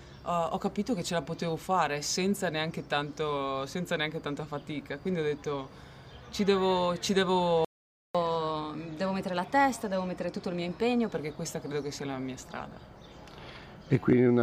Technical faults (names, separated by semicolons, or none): playback stall; catch-up at higher speed